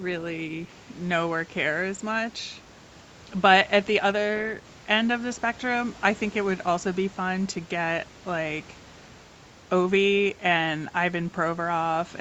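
Nothing in this speech recording points to a technical fault at any point.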